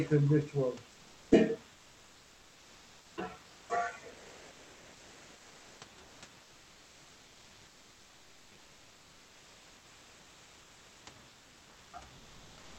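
In the speech pauses at 1.75–3.17 s, 4.11–5.81 s, 6.03–6.21 s, 11.29–11.93 s and 12.17 s to the end, the room's real background drops out and comfort noise in place of the background takes over: a flat, textureless hiss that runs about 2 dB quieter or louder, or at about the same level, for each gap. It's likely Opus DTX: the sender goes quiet when nobody's talking and the receiver fakes the room sound until speech returns. The call audio tops out around 8 kHz, as you'd expect from Opus on this path.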